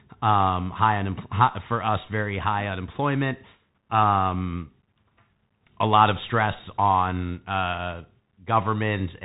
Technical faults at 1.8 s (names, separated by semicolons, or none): Bluetooth CVSD headset codec